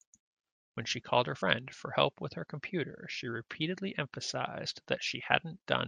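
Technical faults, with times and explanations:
Throughout: MP3 compression. The speech has a watery, swirling quality, with sibilants turning metallic and chirpy, and attacks sound smeared. This likely comes from lossy MP3 coding at a low bitrate, which fits something near 64 kbps. Short of bits, the encoder drops quieter frequency lines, which flicker in and out from one frame to the next.
1.41 s and 4.65 s: compressed frames skipped. At each point the audio jumps forward. The first jump loses roughly 70 ms, which points to about three frames. The second loses around 20 ms, which fits a single frame. With a 24 ms frame length, whole blocks were simply never decoded. Adjacent frames overlap, so each join is heard as a brief smeared blip, not a sharp click.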